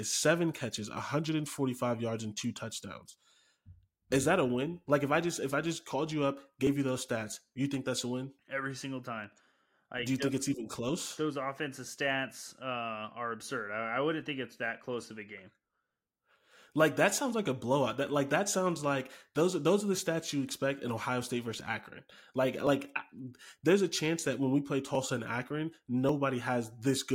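Near the end of the speech there are three skips, at 22.67, 24.95 and 26.09 s, each with a tiny jump forward where a few milliseconds just vanish. That's likely a dropped buffer (overrun): samples got overwritten before being read, and the edges spliced together.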